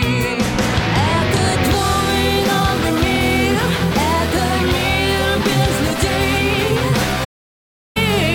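AAC frame loss with muting, 7.24 to 7.97 s: lost frames decode as zeroed spectrum, so the sound fades into a soft-edged 0.73 s hole.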